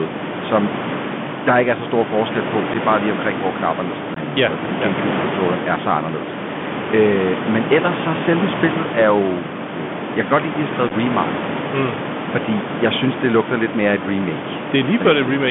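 The whole speech clip carries the Bluetooth CVSD headset codec. Its one-bit, 64 kbps delta coding limits the line to about 150 Hz to 3.5 kHz. S sounds turn scratchy. Loud peaks distort where the step size lags. A grainy hiss sits under the speech.

Unconcealed Bluetooth headset packet loss follows. At 2.74 s, just before "er bare lige omkring", a couple of packets vanish, a 7.5 ms hole. At 4.14 to 4.18 s, after "omkring hvor knapperne sidder", 18.8 ms drops abruptly. At 10.88 to 10.92 s, after "lide at de har", short gaps scatter and crackle.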